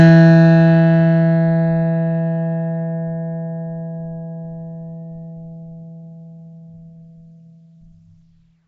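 From start to finish the music carries a rough, grainy hiss clinging to everything, with a smeared, underwater blur and nothing at all above about 7.7 kHz. That points to Nellymoser compression, likely the old Flash codec at a rate that fits a 32 kbps stream. It spends a fixed, tiny bit budget on short blocks, so weak bands get no bits and are patched with noise, which is exactly that fizzy halo you hear.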